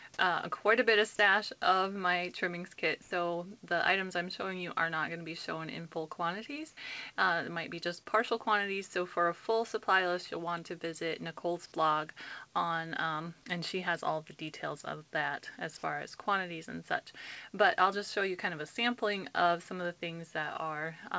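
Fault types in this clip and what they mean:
Sound dropped by the voice detector: Between 1.16 and 1.19 s, about 30 ms of the audio gives way to a flat, steady noise, and roughly 20 ms of real sound goes missing. The likely cause is the sender's voice detector mistaking that bit for background and briefly going quiet.
Comfort noise in place of the background: From 3.02 to 3.11 s, the real background, sitting about 24 dB below the loud parts, turns into a smooth, detail-free hiss about 4 dB quieter. That's likely the receiver filling a gap while the sender paused transmitting.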